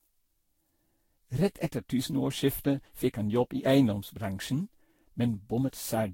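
Throughout, the speech sounds swirly, smeared and hollow, with blurred attacks and nothing above 16.6 kHz, likely generation loss from around seven repeated Vorbis re-encodes.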